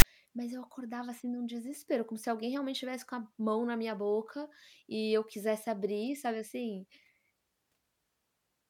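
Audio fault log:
0.00–0.04 s, file tags played as audio: a block of text tags and zero padding was decoded as samples, giving a rasp offset to one side and a short silence before "mas eu acordava assim".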